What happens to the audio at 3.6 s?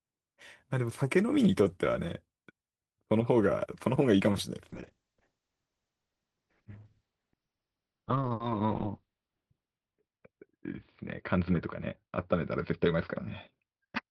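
Nothing goes wrong at 3.6 s; the audio runs through that moment intact, with no dropout, click or distortion.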